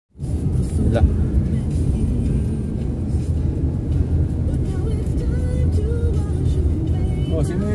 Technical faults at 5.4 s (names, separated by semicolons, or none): none